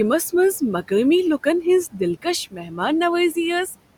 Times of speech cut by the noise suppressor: 2.51-2.72

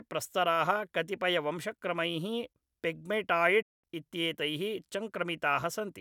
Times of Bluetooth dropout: 3.62-3.84

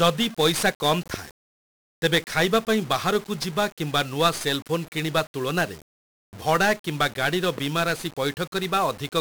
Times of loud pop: 1.14-1.16, 7.58-7.60

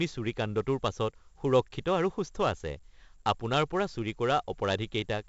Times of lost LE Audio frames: none

